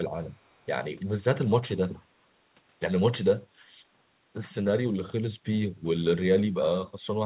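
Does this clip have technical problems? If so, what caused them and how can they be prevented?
Yes. Echo leak briefly brings back faint scraps of the speech about 332 ms late, roughly 30 and 35 dB down, at 1.00–1.06 s and 1.97–2.04 s. The likely cause is a far-end echo canceller passing loudspeaker pickup. A spectrogram shows weak delayed copies of earlier harmonics, and the waveform shows small bursts. Headsets or better-tuned far-end echo cancellation would prevent it.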